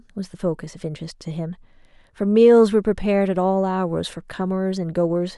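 Listening to the speech in this clip, nothing stood out as a technical problem.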